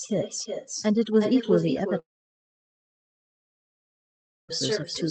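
A noise reduction stage set far too aggressively runs through the whole clip. It pushes any frequency band near its noise estimate down to almost nothing, so the background becomes near silence flecked with twinkling specks, and the speech has its quieter parts stripped away.

Throughout the clip there is also echo with no canceller. The far end's loudspeaker feeds back into its microphone and nothing removes it. Every phrase is followed roughly four tenths of a second later by a thinner copy about 7 dB quieter.

From 1.99 s to 4.50 s, roughly two and a half seconds of audio go missing, likely because of a long network dropout. The receiver briefly stretches the last sound into a fading buzz, then falls to silence until the speech resumes with that stretch gone.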